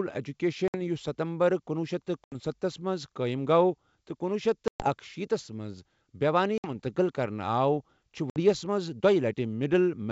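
At 0.68, 2.24, 4.68, 6.58 and 8.30 s, the speech drops into hard-edged silent holes from packet loss on an ADPCM call. The holes last about 60, 80, 120, 60 and 60 ms, and the middle one is the longest. After each gap, the decoder's predictor and step size no longer match the sender's. So the speech comes back with brief, slight distortion. Then it settles. The G.722 wideband coding underneath stays clear, with at most a faint upper-band hiss.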